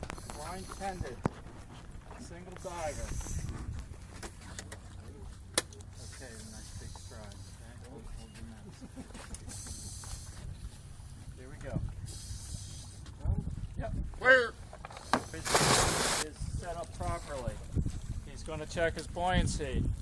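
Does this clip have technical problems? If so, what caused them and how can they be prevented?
No, nothing technical stands out here, so there's no cause to track down and nothing you need to do differently next time.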